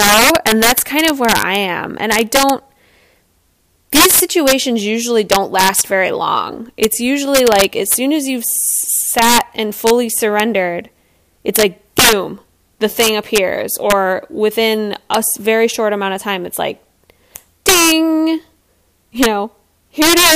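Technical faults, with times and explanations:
Throughout, integer overflow: the signal's being pushed roughly 11 dB past full scale, and instead of getting held at the ceiling, the loudest peaks wrap around to the opposite extreme. Only a small fraction of samples, around one percent, go over, but each one jumps across the whole range, so the louder bits of speech get these harsh, violent cracks that sound much nastier and sharper than ordinary clipping.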